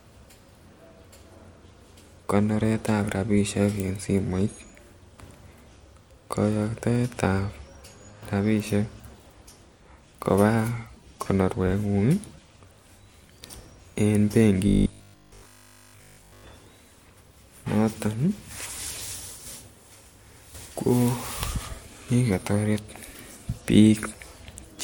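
Speech clip with robotic sound from 14.68 to 16.44 s: a fixed 50 Hz buzz runs through the voice throughout that stretch, likely from a 20 ms buffer being repeated while new audio failed to arrive.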